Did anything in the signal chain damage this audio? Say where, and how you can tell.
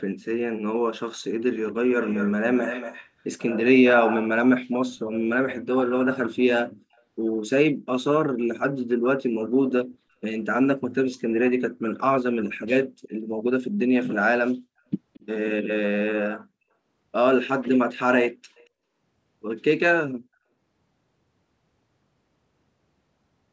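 Yes, there's an echo leak in the call processing stage. You can hear a delayed copy of the speech trailing it by about 229 ms, clearest from 1.46 to 2.35 s and 2.55 to 3.09 s, where it sits only around 10 dB under the speech. Fainter scraps show up at 6.93, 13.1, 15.14 to 15.26 and 18.55 to 18.68 s. Likely the far end's loudspeaker got back into its mic and the echo canceller didn't fully subtract it.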